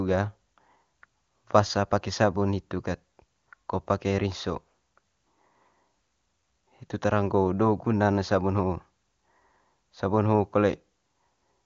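No technical faults can be heard in the speech, which comes through the AMR wideband (HD Voice) codec at 23.85 kbit/s.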